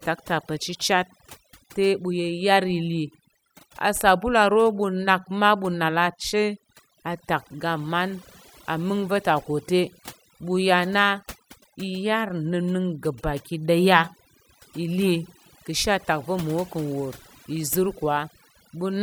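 From start to finish there's overdone noise removal: a too-aggressive denoiser is killing bands near its noise estimate, leaving twinkly near-silent gaps.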